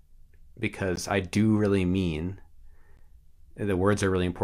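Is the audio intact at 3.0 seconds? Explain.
No. Just after "I do really mean", at about 2.97 s, there is a gap at a join of encoded pieces: a 16 ms hole of silence with edges smeared by the codec. The speech was encoded in separate pieces and joined without trimming, so each piece's encoder start delay and final-frame padding remain. Gaps like this recur every 2.0 s. Unlike a dropout, the speech resumes exactly where it stopped, with nothing lost.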